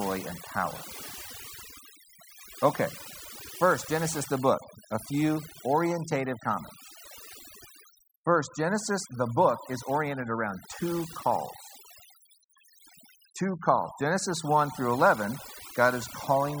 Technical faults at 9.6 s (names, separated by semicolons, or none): overdone noise removal